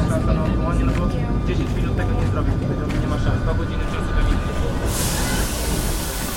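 Nothing stood out on listening to this recording.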